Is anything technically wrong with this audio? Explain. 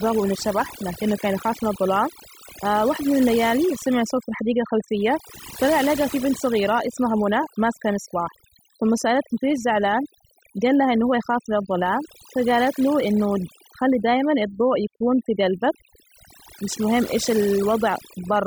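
Yes. Overdone noise removal runs through the whole speech clip. The noise reducer was pushed too hard. It shuts off frequency bands that sit close to its noise estimate, taking quiet speech detail too. The background in pauses drops and breaks up into twinkling, warbling specks.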